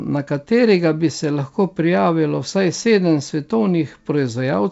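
No faults are audible in the speech; the band stops at 8 kHz, which fits a wideband call codec such as G.722 at 64 kbps.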